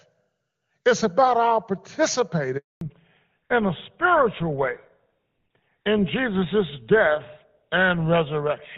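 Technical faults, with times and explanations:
2.57 to 2.81 s, handover gap: the speech cuts out within a few tens of milliseconds and stays silent for 240 ms, which is what you hear when a call gets passed from one network to another and no speech frames make it across during the switch. Whatever was said in that quarter second is simply gone, not muffled or smeared. Sound only comes back once the new link is up and carrying frames.
2.81 s to the end, fallback to narrowband: right after the gap the call drops from HD Voice at what sounds like 23.85 kbit/s AMR-WB down to GSM full rate at 13 kbit/s. Before the switch the wideband path is clear, with little or no codec damage. After it, nothing above 4 kHz gets through, so the speech loses its air and sibilance and turns duller and rougher, the classic old-phone sound.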